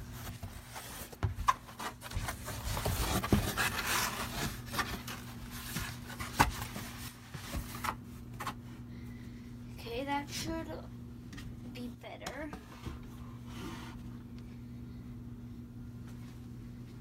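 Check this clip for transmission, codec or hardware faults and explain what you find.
Three sudden level dips: one channel drops out at 0.36–2.16 s, 7.08–7.44 s and 11.95–12.83 s. The sound falls abruptly by about 6 dB, likely because one stereo channel vanished before the mono sum.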